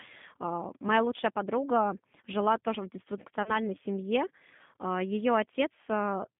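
The whole recording has passed through the G.729 codec, here the G.729A variant at 8 kbit/s, which rebuilds the speech from a vocal-tract filter and a few pulses per frame inside a 150 Hz to 3.5 kHz line band, so it sounds plainly rough, thin and slightly synthetic.

From 3.43 to 3.58 s, just after "подруга жила тоже в", VoIP packet loss concealed by the speech codec occurs. About 30 ms of audio went missing, which fits a single lost packet. The decoder then extended its last pitch and filter state, so the sound smears into a brief buzzy tone or coloured noise that fades, and stays weakened for a while after the data returns.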